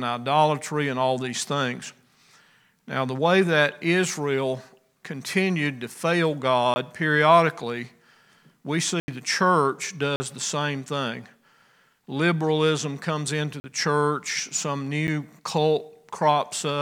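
Blocks of digital silence cut the audio at 6.74–6.76, 9.00–9.08, 10.16–10.20 and 13.60–13.64 s, and at 15.07 s. They last 9 to 80 ms, with abrupt edges. The waveform shows flat near-silent runs, and the spectrogram shows blank columns edged by vertical broadband lines, likely from output buffers not filled in time.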